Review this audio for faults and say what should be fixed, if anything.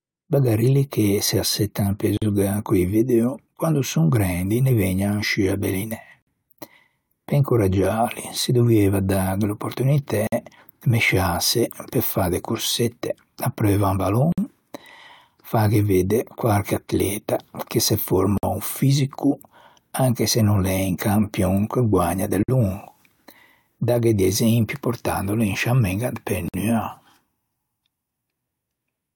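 Separately encoded 4-second pieces were joined untrimmed, leaving encoder delay and padding: a gap at a join of encoded pieces, cutting 47 to 53 ms silences into speech at 2.17, 6.22, 10.27, 14.32, 18.38, 22.43 and 26.48 s. To prevent it, encode the speech as one continuous stream, or trim each piece's encoder delay and final-frame padding before joining.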